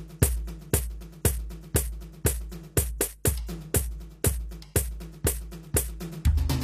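A short music clip with plainly audible codec damage from start to finish, most likely HE-AAC compression at a low bitrate, which fits something around 24 kbps. The upper spectrum is not the original material but a replica built from copied lower bands, so its harmonics fail to line up with those below the crossover, and the treble sounds bright yet gritty and metallic. There is no content above roughly 14.9 kHz.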